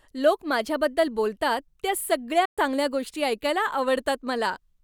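At 2.45 s the speech cuts out abruptly and stays silent until 2.58 s, losing about 120 ms. It then carries on as if it had kept playing underneath. That points to a likely Bluetooth dropout, where several packets missed the headphones and were discarded.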